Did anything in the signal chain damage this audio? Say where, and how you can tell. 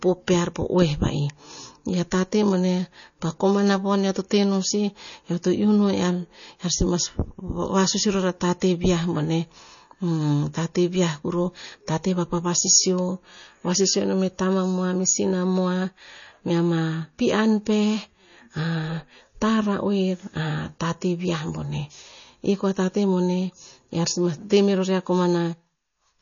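Yes, the codec: the speech sounds watery throughout with nothing above 7 kHz, likely MP3 compression at a low bitrate, which fits about 32 kbps.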